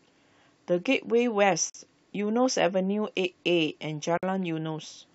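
Separately encoded pieces of this speech were joined without trimming each encoder's start-up delay and final-frame padding, leaving a gap at a join of encoded pieces: a 46 ms gap at 1.70–1.74 s and a 53 ms gap at 4.18–4.23 s, each breaking into the sound with smeared edges before it resumes where it stopped.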